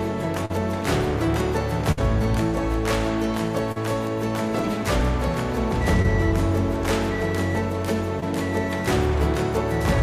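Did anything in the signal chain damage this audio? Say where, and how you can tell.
Yes. The damage happened on the network leg of a call, and it shows up as short concealed packet loss at four points: 0.45 to 0.51 s, 3.72 to 3.78 s, 6.02 to 6.06 s and 8.20 to 8.24 s. Each is a brief smear or wobble lasting 17 to 40 ms. In each gap the decoder received nothing in time, so it extended the preceding sound by repeating its pitch or shaping noise to match, then crossfaded back into the real audio.

There is also one burst of packet loss at 1.91 to 1.99 s, again a network-stage fault. Here about 60 ms of audio went missing in a row. For roughly 57 ms the receiver kept the last sound going and faded it down as the gap lengthened, giving a held, dying tail rather than a quick smear. The audio then picks up further along, and the span in between is simply gone, so the sound jumps forward where playback resumes.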